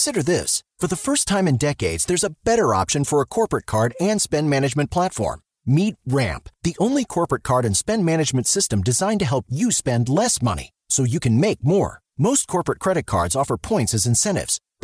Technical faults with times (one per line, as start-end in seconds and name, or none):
none